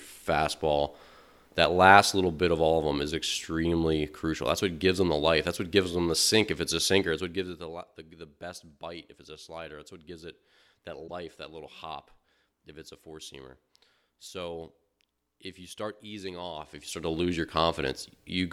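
It's a speech recording, and at 11.06 to 11.11 s there's a short glitch where the audio skips ahead. That's likely a broken MP3 bit reservoir: frames went missing, and the next one reached back for data that wasn't there, which fits frames of about 26 ms.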